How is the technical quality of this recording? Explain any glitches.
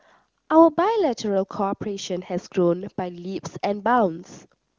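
No glitches can be heard in this speech recording, which comes through the AMR wideband (HD Voice) codec at its top rate of about 23.85 kbit/s and shows at most faint coding damage.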